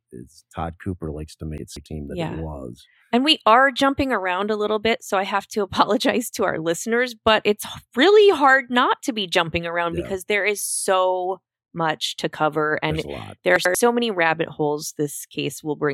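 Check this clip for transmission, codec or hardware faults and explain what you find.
Two spots of chunks out of order. At 1.58 to 1.86 s, after "todd cooper likes to", a block of about 93 ms lands two blocks late. At 13.56 to 13.75 s, between "much to cover and" and "many rabbit holes", one lands a block late. The audio is all there, just shuffled, so each spot comes out as a jumbled blip.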